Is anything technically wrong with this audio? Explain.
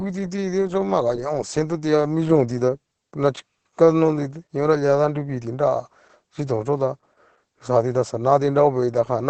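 Yes, throughout there's heavy Opus voice compression: nothing above 8.7 kHz, and coarse SILK excitation coding that fits roughly 10 kbps, leaving the speech muffled, hoarse and slightly robotic.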